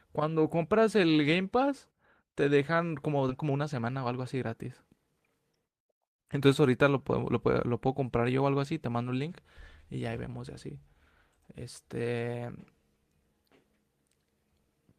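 At 3.29 to 3.31 s there is a skip ahead. About a second of speech was dropped while later audio was already queued. Playback jumps straight forward with no gap filled. The two sides are joined almost directly, so a chunk of speech simply vanishes.

From 3.43 to 5.20 s comes a jitter buffer speed-up. The buffer held more audio than it wanted. The receiver trimmed many short pitch-period pieces, about 150 ms in all. Speech runs at 109 percent speed with unchanged pitch and sounds hurried.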